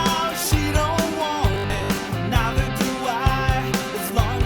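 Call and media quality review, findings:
Robotic sound from repeated short buffers, 1.54 to 1.98 s. Symptom: rigid metallic buzz near 50 Hz, loosely tracking the sound's contour. Likely cause: audio buffer starved, playback looping the last chunk. Mechanism: 50 Hz fits a repeated 20 ms buffer, with about half the real audio skipped. Distinguishing: fixed pitch at one over the buffer length, unlike plain dropouts (silence) or codec artefacts (no steady buzz).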